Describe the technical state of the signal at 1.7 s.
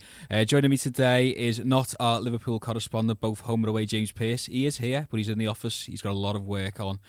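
At 1.7 s the signal is intact, with no audible fault at that point in the speech.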